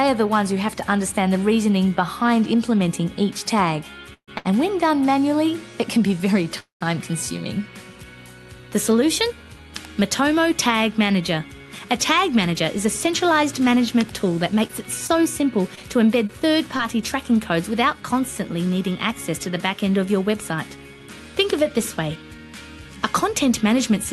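At 4.13 s the sound stops moving forward. The last moment carries on as a fading buzz, then drops to silence for about 80 ms before resuming at 4.30 s. The same happens at 6.60 s, with about 130 ms of silence inside a 0.2 s hold that ends at 6.83 s. These are call audio freezes, likely from packets held up in transit. The jitter buffer ran dry and the receiver extended the last sound until the packets arrived. Playback then picked up exactly where it paused, so nothing is lost, but the timeline gains about 143 ms and 207 ms respectively.

Just after the first freeze, from 4.38 to 4.47 s, a sound hangs on slightly too long with a faint buzzy dip. This is a short stall from a late packet. One packet missed its slot, and the receiver stretched the preceding audio for 72 ms until it turned up. Playback then continued from the same point, so nothing is missing, only delayed.

From 11.58 to 13.77 s the audio runs noticeably quicker, about 107% of normal speed, yet the pitch stays put, giving a slightly hurried feel. 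It happens again, more sharply, at 22.09 to 22.39 s, at about 116%. This is a jitter buffer speed-up. Having built up more audio than it targets, the receiver trimmed tiny pitch-period slices over and over to shed delay, roughly 150 ms in the first stretch and about 50 ms in the second.

Between 14.67 and 16.81 s there are scattered short gaps: around five brief ticks and little smears, each no longer than about 20 ms, adding up to roughly 100 ms. Individual packets were lost here and there, and the receiver papered over each hole by continuing the previous sound. The audio stays clear, with only these small hiccups. Throughout, the call codec's coding noise and a top end rolled off near 12 kHz can be heard, consistent with a call path running at about 48 kbps.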